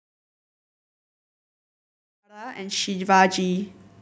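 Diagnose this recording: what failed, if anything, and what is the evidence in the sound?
Nothing failed; the speech shows no audible technical fault.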